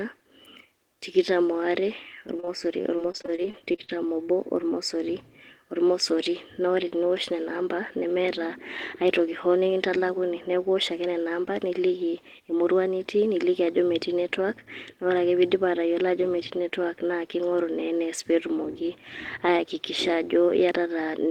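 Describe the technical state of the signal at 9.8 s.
Jitter buffer speed-up runs from 9.20 to 9.88 s, covering 9.8 s. After a backlog of audio built up, the receiver repeatedly trimmed short pitch-period slices, about 50 ms in all, so the speech plays at 107% speed with unchanged pitch and sounds hurried.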